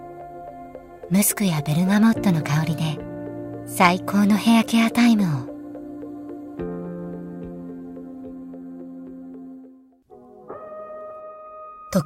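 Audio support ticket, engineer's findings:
Clock drift between sender and receiver, whole clip: sender clock running slow by roughly one and a half percent, so the jitter buffer keeps draining. Small, unevenly spaced hiccups throughout. On a waveform, brief duplicated segments with abrupt joins. On a spectrogram, short vertical seams.

Repeated timing corrections, 0.42 to 11.86 s: receiver repeating short pieces to keep pace, effective speed 98%, stretching the span by about a fifth of a second. On a spectrogram, irregular discontinuities, each one a small repeat.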